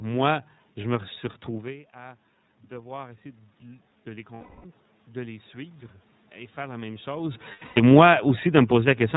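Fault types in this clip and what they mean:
iLBC codec: Narrowband coding in independent frames, likely 30 ms, leaves the speech plainly rough and synthetic. Spectrograms show a hard ceiling at 4 kHz with blurred harmonics.
automatic gain rising: From 1.48 to 5.83 s, the gain climbs about 8 dB to offset a quieter input. The waveform envelope and the noise floor both swell gradually.
lost iLBC frames: Gaps at 4.35–4.66 s and 7.52–7.80 s, the second just after "faire la même chose", are filled with a held buzzy vowel that appears as smeared flat harmonics.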